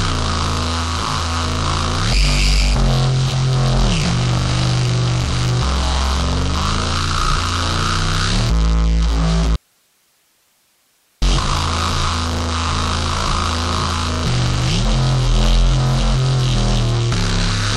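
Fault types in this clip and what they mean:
Audio dropout to a faint residue: the sound cuts out abruptly from 9.56 to 11.22 s, leaving only faint hiss, likely because the signal was lost while the path stayed live. The waveform shrinks to a thin band, and the spectrogram shows a sharp-edged gap of dim broadband noise.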